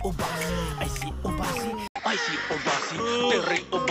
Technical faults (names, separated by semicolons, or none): input switched to a poorer device